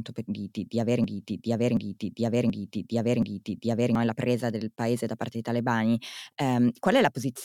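From 1.04 to 3.95 s, after "di di di aver", a broken-record loop repeats one 0.73 s fragment four times, likely a stalled stream resending its last piece. The intended speech is lost until "e la presa del". Waveform and spectrogram show identical tiled blocks.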